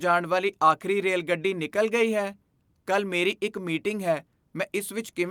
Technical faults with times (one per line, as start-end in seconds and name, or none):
none